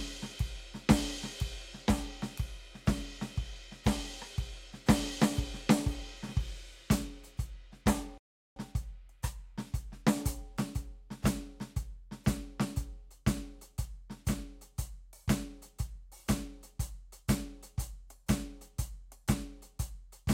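At 8.18 s the music cuts out in a playback stall, falling silent for about 0.38 s until 8.56 s. The player likely ran short of data or had its thread blocked. The waveform shows a flat gap, and the spectrogram a blank vertical band.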